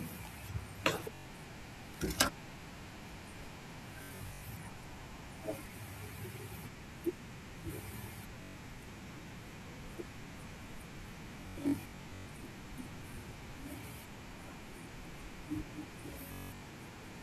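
Bluetooth packets arrived late or not at all, and the receiver kept replaying its last short slice. The result is Bluetooth stutter, a buzzing, machine-gun repetition at 1.15–1.27, 4.03–4.43, 8.43–8.56, 11.41–12.32 and 16.28–16.67 s. The longest unbroken run, 192 ms near 16.3 s, ends with the speech jumping ahead.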